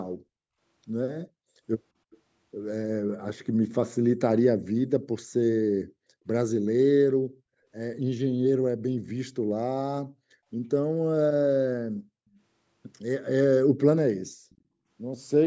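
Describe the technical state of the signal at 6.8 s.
At 6.8 s the speech signal is intact, with only the normal band limit of call microphone processing, which leaves nothing above 8 kHz and trims the lowest bass.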